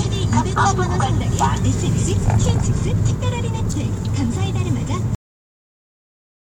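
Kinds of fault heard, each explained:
Cut-off end: At about 5.15 s the sound stops abruptly, mid-event, with no fade, tail or natural decay, and what follows is flat digital silence that lasts roughly 1.4 s to the end of the clip. The ear hears the sound being chopped rather than finishing. This happens when the final stretch of audio never reaches the output: the closing buffers are not written or played, so playback simply ends where the data runs out.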